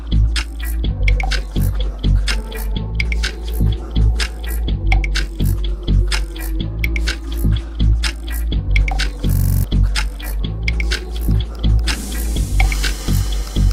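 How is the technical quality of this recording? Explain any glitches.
One glitch stands out. From 9.34 to 9.64 s, a system hang loop repeats one 42.67 ms slice seven times, a 23.4 Hz stutter. The stalled system left the hardware replaying its buffer, which fits a 2048-sample buffer, and about a third of a second of audio is lost.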